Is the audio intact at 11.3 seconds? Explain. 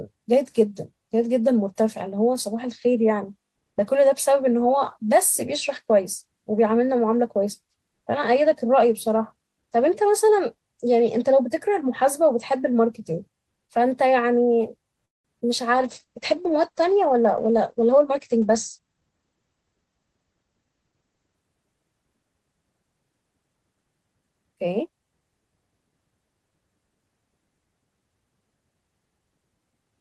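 Yes, the speech at 11.3 seconds is intact, with nothing there beyond the ordinary coding of the WebRTC call path it travelled through.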